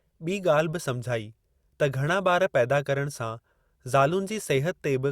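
Nothing in this bit of speech stands out as a technical fault, so there's no problem to point to here.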